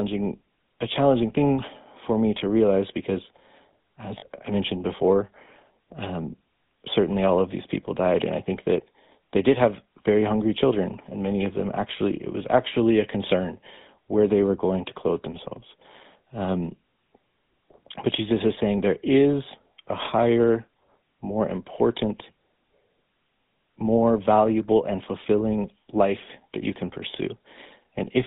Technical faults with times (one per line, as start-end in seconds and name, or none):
0.00-28.27 GSM full-rate codec
4.18-4.28 lost GSM frames